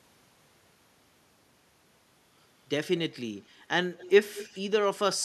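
Between 3.93 and 4.10 s, and again from 4.34 to 4.60 s, a faint delayed copy of the speech trails the talker by about 200 ms: an echo leak, likely from a far-end loudspeaker whose echo canceller let some pickup through. The first scrap sits roughly 20 dB below the speech, the second nearer 15 dB. On a spectrogram, a weaker replica of the harmonic pattern appears shifted 0.2 s later. The waveform shows small echo bursts smearing the speech envelope.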